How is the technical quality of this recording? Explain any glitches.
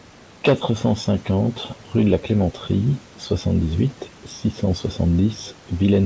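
No glitches can be heard anywhere in this speech recording. It has the sound of a wideband call, with nothing above 8 kHz, which fits a G.722 codec.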